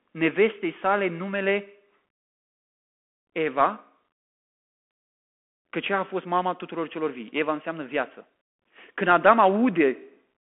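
Throughout, a Bluetooth CVSD headset codec limits the speech to 200 Hz–3.4 kHz, with nothing above 3.8 kHz. One-bit step tracking leaves scratchy sibilants and granular hiss.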